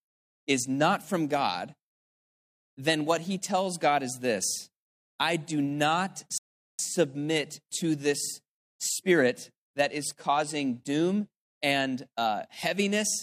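At 6.38 s, just after "this I do not", a rebuffering stall cuts the speech to silence until 6.79 s. The player ran out of downloaded audio and waited, then resumed exactly where it stopped, adding 0.41 s. The waveform shows a flat gap, the spectrogram a blank column.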